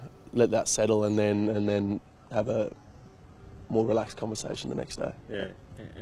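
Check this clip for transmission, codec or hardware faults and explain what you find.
There's one fault: the stream drops to a lower bitrate partway through. From 1.34 s to the end, the adaptive stream switches to a much leaner encoding, most likely because the connection slowed and the player picked a cheaper version to keep going. There's no gap at the switch, just a sudden change. The treble takes on that synthetic, reconstructed sheen. That points to spectral band replication at something like 16 kbit/s, down from a clean AAC stream around 96 kbit/s.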